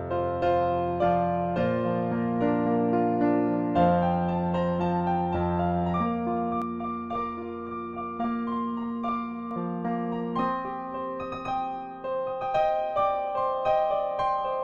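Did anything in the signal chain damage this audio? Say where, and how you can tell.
Yes. From 6.62 to 9.51 s, a channel delay (doubling) at the driver or buffer stage adds one same-level repeat 46 ms late, which fits a 2048-sample buffer offset before a mono sum. Unlike room echo, there is exactly one copy and no decaying tail.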